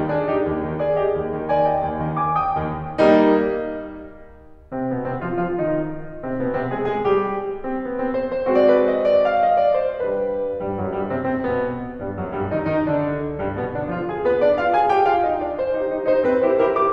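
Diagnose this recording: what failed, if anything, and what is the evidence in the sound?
Nothing in the signal chain has failed, and the music arrives as a continuous, intact signal with no audible disturbance at any stage from capture to playback.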